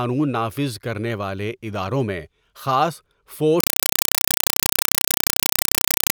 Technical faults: compressed stream played as audio

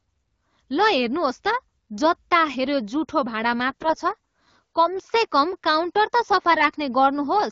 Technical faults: AMR bit errors

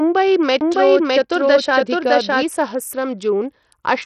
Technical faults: Bluetooth SBC compression; doubled audio track

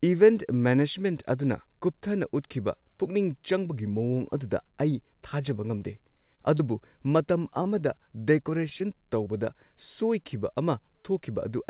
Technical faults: repeated packet loss (robotic sound); short stall from a late packet; short concealed packet loss

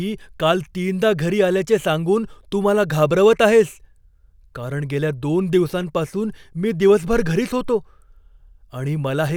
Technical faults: none

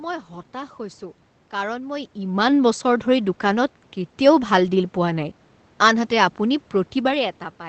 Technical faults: lost packet rebuilt from error correction

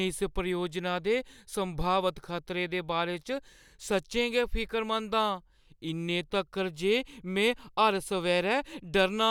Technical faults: none

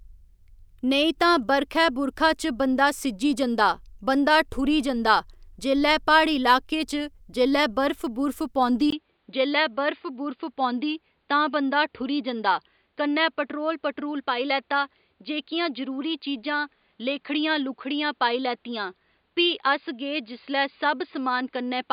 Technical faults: input switched to a poorer device

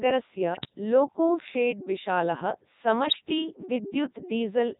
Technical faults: Codec 2 vocoder; bit errors on digital voice radio

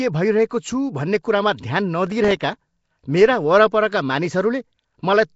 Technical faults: Nellymoser compression; processor overload crackle

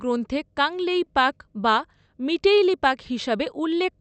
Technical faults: short stall from a late packet

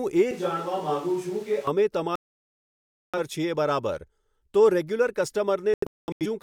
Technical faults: switch to a distant microphone; digital broadcast dropout

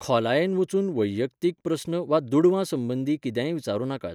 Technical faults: none

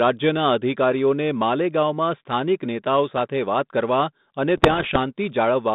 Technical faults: bit errors on an ADPCM link

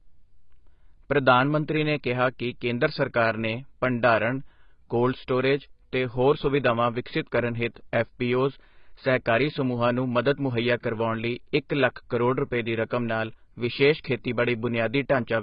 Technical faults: AAC compression

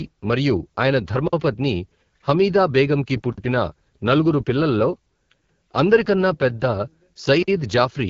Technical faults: AMR wideband (HD Voice) codec; gap between chunks

